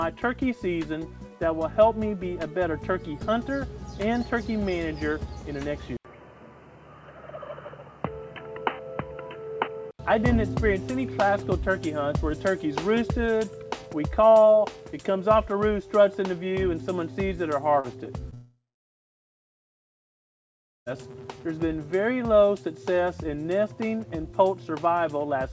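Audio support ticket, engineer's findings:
Input switched to a poorer device, 5.97 to 9.99 s. Band stops at 3.1 kHz. 80 ms silence at switch. New noise floor, roughly 40 dB down. Level unchanged. Likely cause: input device change.

Short concealed packet loss at 17.80, 18.04 and 18.30 s. Gaps of 40, 20 and 20 ms. Receiver extends last sound, then blends back. Brief smear.

Long network dropout, 18.34 to 20.88 s. Last sound continues and fades, then about 2.3 s silence. Audio resumes with that stretch gone. Likely cause: network outage. Outside the switch, G.722 path reaches 8 kHz.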